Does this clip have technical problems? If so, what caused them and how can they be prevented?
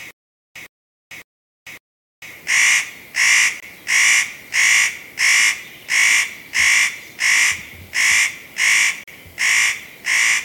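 Yes. Stutter with silent gaps, 0 to 2.33 s: already under way when the clip starts, a 109 ms burst repeats four times every 0.56 s, with about 0.45 s of digital silence between repeats. This is likely a stalled player or stream replaying its last fragment on each retry, and the audio from that stretch is lost. A larger playback buffer and a steadier network connection would prevent it.

Bluetooth stall, 3.60 to 3.63 s and 9.04 to 9.08 s: the sound drops to silence for 24 ms and then 40 ms, likely because interference starved the headphones' buffer until resent packets arrived. Moving the phone closer to the headphones and away from crowded 2.4 GHz sources would prevent it.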